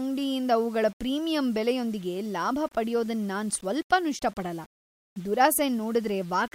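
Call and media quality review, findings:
Grainy, signal-following distortion throughout the speech, quiet tails gritty. Likely low bit depth without dither, undithered rounding consistent with about 7 bits, error near 30 dB below signal. Waveform shows visible staircase steps. Spectrogram shows broadband noise tracking speech energy.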